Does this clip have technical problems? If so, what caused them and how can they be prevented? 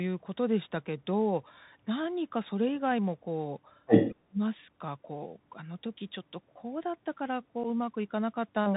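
Yes. Throughout, the sound is band-limited, with scratchy sibilants and granular hiss, typical of the Bluetooth CVSD headset codec, whose one-bit slope coding cuts everything above 4 kHz. A wideband headset profile such as mSBC or LC3 prevents this.

From 3.86 to 4.13 s another voice intrudes, roughly 10 dB above the talker, most likely the other side's voice leaking through past an incomplete echo canceller. Better acoustic isolation or a headset instead of a loudspeaker prevents it.

From 4.1 to 4.4 s the talker drops deeply, around 40 dB, likely as speech is suppressed in double talk, with the canceller muting both voices when they overlap. Full-duplex echo cancellation with stronger double-talk detection prevents it.

At 7.64 s a 7.5 ms hole with abrupt edges appears, unconcealed Bluetooth headset packet loss, which fits a single dropped packet. Packet-loss concealment and a stronger radio link prevent it.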